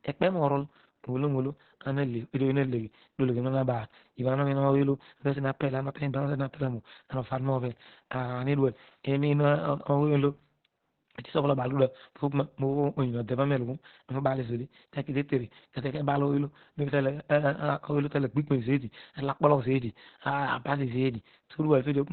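From start to finish the speech carries heavy Opus voice compression. Nothing survives above about 4.3 kHz, so it's squeezed into narrowband SILK coding, and the coarse excitation leaves it muffled, hoarse and a bit robotic, which fits a bitrate down around 8 kbps.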